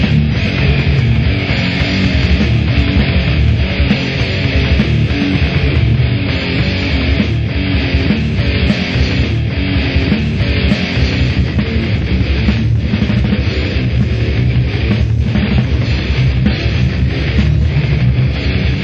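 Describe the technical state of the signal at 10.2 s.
At 10.2 s the signal sits inside a stream segment repeated fault that runs from 9.23 s to 11.25 s. The player has fetched or queued the same segment twice, so roughly 2.02 s of already-heard audio plays again before the stream resumes its forward position. At the jump back near 9.23 s there is a small blip where the playback discontinuity splices the end of one pass onto the start of the duplicate.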